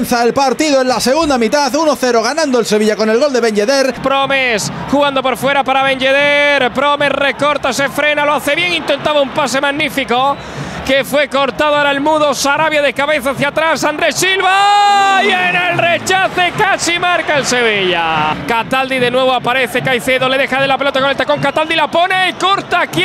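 Nothing here needs pointing out: I listened all the way along and didn't catch a single technical fault at any point.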